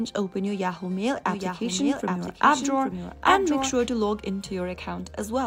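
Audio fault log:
1.26 to 4.08 s, doubled audio track: a second full-band copy of the sound runs roughly 0.7 s behind the original, about 5 dB quieter, dry with no decay, starting and stopping abruptly; likely a second capture path or an edit holding two offset copies.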